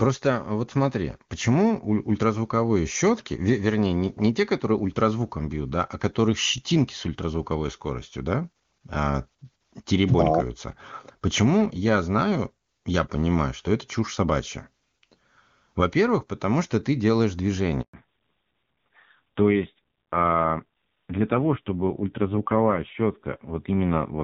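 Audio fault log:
17.82–17.94 s, handover gap: the speech dies away abruptly and stays silent for 120 ms while the call switches from one network to another. No speech frames reach the listener during the switch, so whatever was said in that moment is missing, not merely muffled.
17.94 s to the end, fallback to narrowband: right after the gap, everything above 4 kHz vanishes and the speech turns duller and rougher. The call has dropped from clear HD Voice to an older narrowband codec, and the raspy texture points to a low rate, around 5.9 kbit/s.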